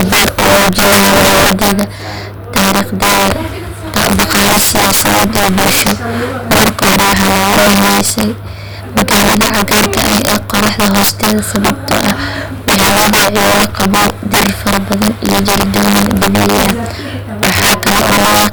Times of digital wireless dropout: none

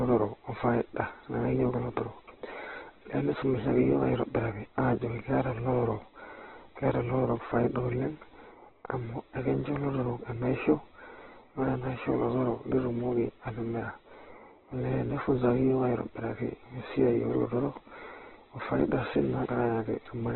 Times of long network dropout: none

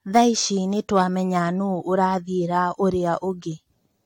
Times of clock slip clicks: none

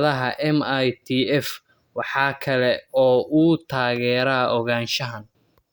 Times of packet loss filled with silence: none

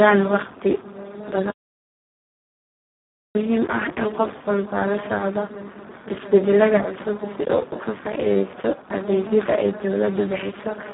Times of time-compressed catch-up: none

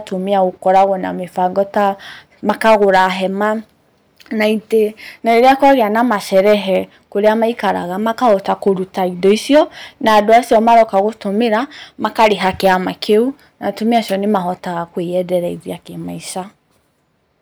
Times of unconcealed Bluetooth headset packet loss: none

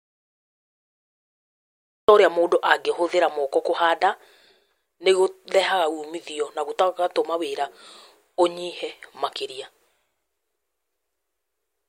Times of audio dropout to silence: 0.00-2.08

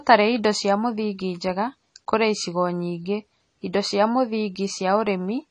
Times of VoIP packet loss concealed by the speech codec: none

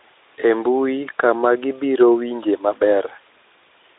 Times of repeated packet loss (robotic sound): none

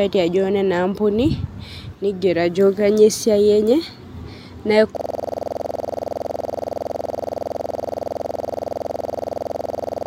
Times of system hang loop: 4.97-10.07

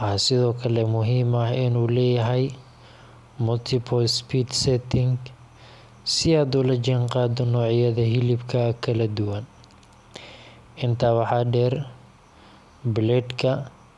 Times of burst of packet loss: none

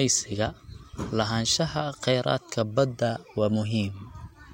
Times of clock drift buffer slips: none

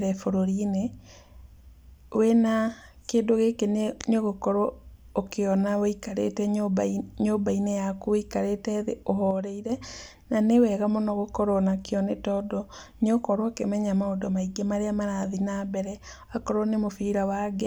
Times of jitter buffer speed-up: none

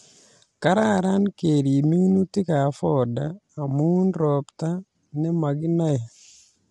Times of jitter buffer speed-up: none

